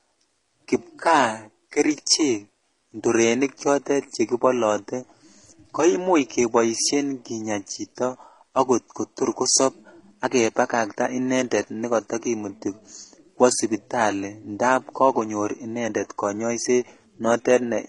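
The speech was likely transcoded between lossy codecs: the sound points to a very low-rate HE-AAC encode, around 16 kbit/s, re-encoded as MP3 near 47 kbit/s. Throughout, nothing sounds above 11.2 kHz, and smeared, swirling first-codec artefacts are heard alongside the MP3's own warbling distortion.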